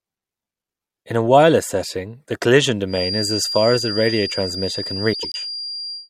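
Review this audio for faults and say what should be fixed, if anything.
From 2.86 s to the end of the clip, a thin, steady whistle at 4.8 kHz sits behind the speech, roughly 10 dB below it and swelling and fading slowly in level. This is a feedback whistle, likely from a loudspeaker-to-microphone loop held just at the point of feedback, so one frequency rings without building. Unlike a mains hum or a fixed electronic tone, it drifts in level with the loop gain. To prevent it, lower the monitor gain or notch 4.8 kHz.

Between 5.13 and 5.36 s, the speech turns into a garbled flutter. This is frames out of order: two neighbouring 96 ms blocks, which fits runs of four frames each, play in swapped order, so the stretch runs its halves reversed. Unlike a dropout or a repeated frame, no time is lost or added; the audio is only rearranged. Packet sequencing with a correctly sized reorder buffer would prevent it.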